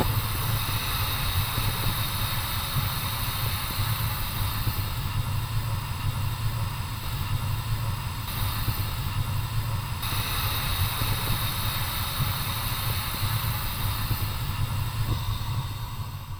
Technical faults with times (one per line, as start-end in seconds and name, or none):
none